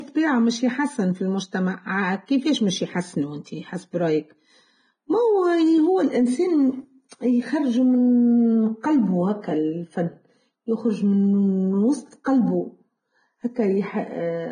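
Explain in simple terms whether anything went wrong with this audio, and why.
The speech sounds hissy and grainy throughout, with a dull top end where nothing above about 9.7 kHz survives. This is Vorbis compression, likely squeezed to a low quality, so the fine treble detail is replaced by rough noise and edges blur.

At 12.24 s a brief hiss comes just before a sharp sound, making that onset soft and smeared. This is pre-echo: the codec spreads its noise across a short block, so the noise meant for the loud moment also fills the quiet instant before it.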